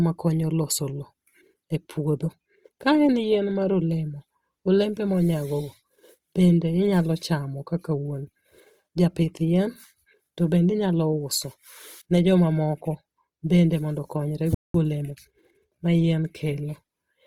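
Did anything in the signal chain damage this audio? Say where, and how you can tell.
Yes. At the codec stage, the audio was likely coded with Opus in its CELT music mode at a low rate, one that fits about 24 kbps. Band energy survives but fine detail is filled with noise, so the speech sounds grainy and rough throughout, though the bandwidth stays full.

At playback, the output likely starved of data or its thread was blocked. A playback stall cuts the speech off right after "bende mondo konyre", leaving silence from 14.55 to 14.74 s, about 0.2 s, before the sound resumes where it stopped.

The player then worked off its backlog with time-compressed catch-up, cutting out small pieces and cross-fading the joins. From 14.74 to 15.52 s the speech runs 1.25 times faster at unchanged pitch, returning to normal speed just before "ma yien".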